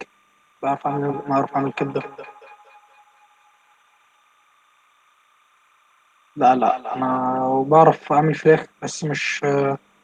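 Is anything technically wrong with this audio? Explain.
Yes, there are two faults. Timecode bleed runs through the whole clip. Linear timecode from a neighbouring line leaks in as a square wave flipping between pitches near 1 kHz and 2 kHz, roughly 40 dB below the speech. It sounds like a faint, steady chirping warble. Its rhythm fits 29.97-frame code, and that regular chatter sets it apart from a plain hum or whine.

From 0.84 to 7.24 s there is feedback echo between two devices. One device replays what another's microphone sent, and that microphone captures it again, beyond the reach of either echo canceller. The speech returns at a fixed interval of about a fifth of a second, peaking about 14 dB below the direct sound. These are distinct repeats, not a smooth room reverb tail.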